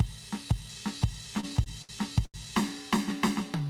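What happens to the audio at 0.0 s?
At 0.0 s the music plays through intact, with no audible fault at that moment.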